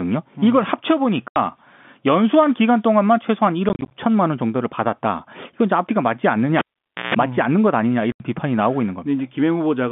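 At 1.28 to 1.36 s the speech drops out for 80 ms. This is packet loss filled with silence. The hole has hard edges, which fits 10 ms packets replaced by nothing. From 3.69 to 3.91 s the same fault returns as scattered gaps over 220 ms. The longest is 30 ms, and they total 100 ms. At 6.59 s a cable is pulled and plugged in. A pop starts about 0.5 s of near silence. A 60 Hz mains buzz lasts about 150 ms, and a second pop brings the sound back at 7.15 s. At 8.12 to 8.20 s another 80 ms silent hole cuts the narrowband G.711 telephone audio.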